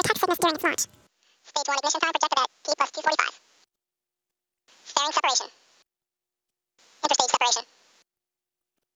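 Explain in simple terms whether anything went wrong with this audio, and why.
The whole clip plays twice as fast as it should and sits an octave too high. This is audio read two samples at a time (double speed). The playback treated each pair of samples as a single step, so everything rushed through at 2x speed.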